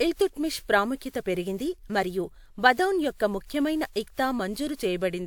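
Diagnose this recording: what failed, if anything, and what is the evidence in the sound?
The codec stage failed. The speech has generation loss throughout: swirly, hollow and smeared, with blurred attacks despite content reaching 20.1 kHz. This likely comes from about four WMA re-encodes near 128 kbit/s, each requantising on a shifted frame grid. A spectrogram would show speckled holes and smeared onsets.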